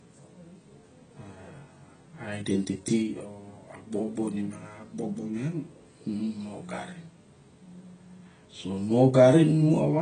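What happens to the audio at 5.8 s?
At 5.8 s the speech carries the same heavy AAC compression damage heard across the whole clip: nothing above about 9.4 kHz, with a smeared, warbling, fizzy texture on sibilants. It is likely low-bitrate AAC-LC, around 16 kbps, discarding and noise-filling bands. A simple low-pass filter would dull the sound without that swirl.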